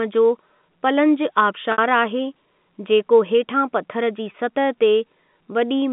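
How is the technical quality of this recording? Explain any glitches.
Two short glitches interrupt the speech, which has the narrow 200 Hz to 3.5 kHz band of G.711 telephone coding. At 1.72 to 1.78 s and 4.32 to 4.34 s, the sound briefly freezes into a held, buzzy tone. This is packet loss with pitch repetition: the receiver loops the last pitch period to cover 60 ms and then 20 ms of missing audio, which fits three lost packets and then one.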